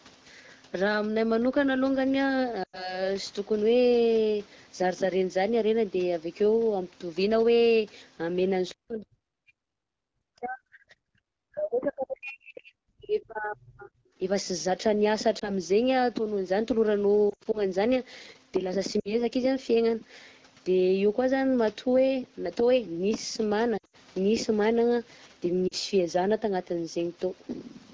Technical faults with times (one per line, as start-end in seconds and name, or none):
2.63-3.03 lost AMR speech frames
8.69-8.74 other side's voice leaking through
8.74-11.05 speech suppressed in double talk
11.50-13.94 speech suppressed in double talk
15.39-15.50 lost AMR speech frames
17.30-17.62 lost AMR speech frames
19.00-19.21 lost AMR speech frames
23.77-23.96 lost AMR speech frames
25.68-25.74 lost AMR speech frames